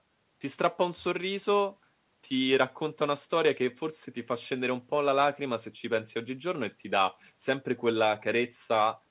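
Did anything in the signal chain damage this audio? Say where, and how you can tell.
No, nothing in the chain damaged this speech; it came over a call path using G.711 mu-law at 64 kbps, so there's simply nothing above 4 kHz, which is just how that codec sounds.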